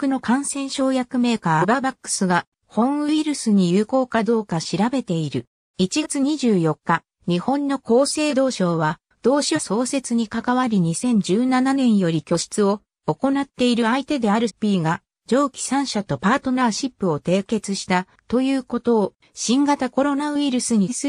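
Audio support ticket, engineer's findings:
Compressed frames skipped: six forward jumps at 1.60, 6.02, 8.29, 9.55, 14.47 and 20.88 s. Probable component: decoder or file, with frames missing or rejected as damaged. The jumps lose about half a second at 1.60 s, about 0.1 s at 6.02 s and about 0.2 s at each of the others, consistent with whole-frame multiples of roughly 46 ms.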